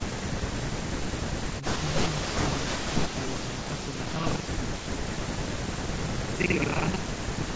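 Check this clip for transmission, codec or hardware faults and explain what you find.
One fault, buffer tearing, runs from 2.6 s to the end. The playback writer and reader slipped, so about a third of each period replays audio roughly 70 ms old, causing a rattling 25 Hz buzz during speech.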